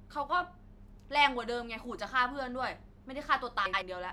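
Between 3.66 and 3.82 s, two neighbouring runs of frames, each 78.4 ms and consistent with three frames apiece, were decoded in swapped order: frames out of order. The speech there plays with its halves exchanged, a garbled flutter, yet no time is lost.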